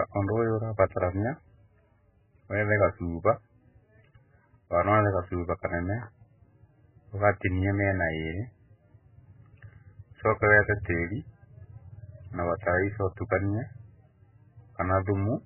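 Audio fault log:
throughout, MP3 compression: the speech sounds watery and swirly, and there's nothing above about 3 kHz, so s sounds and breath lose their edge and come across dull and lispy. The damage is heavy: weak frequency detail flickers in and out from frame to frame, which gives that underwater churn, and consonant attacks smear. This is likely an MP3 encode starved of bits, and a cut-off that low fits something around 8 kbps.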